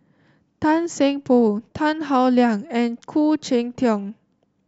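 Nothing goes wrong anywhere in this speech recording, so there's no fault to point out.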